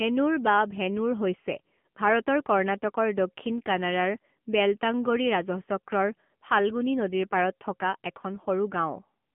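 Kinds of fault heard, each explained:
AMR narrowband mobile codec, throughout: the speech has passed through a mobile-phone speech coder that samples at 8 kHz and rebuilds each 20 ms frame from a vocal-tract model driven by a few pulses. The band runs only from about 150 Hz to 3.4 kHz, so nothing above 3.4 kHz survives, leaving the speech boxy and dull. The buzzy, synthetic texture is plainly audible, which fits a low bitrate of around 8 kbps.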